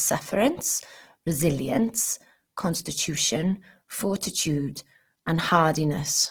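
Right through the speech there's plainly audible Opus compression, likely a music-mode (CELT) encode at around 16 kbps. Starved bands get filled with folded or noise content rather than dropped, so tones turn rough and grainy instead of swirly, though the top still reaches 20.3 kHz.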